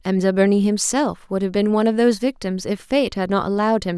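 No technical faults turn up anywhere in the clip, so there is nothing to describe in time order.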